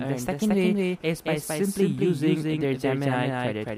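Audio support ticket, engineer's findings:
Doubled audio track throughout. Full-band copy trails the original by about 200 ms, at roughly equal level, no decay or room colour. Likely a second capture path or misaligned edit.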